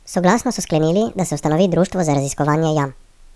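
A speech recording plays back with a wrong sample rate from start to finish: speed and pitch rise together by a factor of 1.5, about seven semitones, so the voice sounds high and hurried. That fits 16 kHz audio replayed at 24 kHz without conversion.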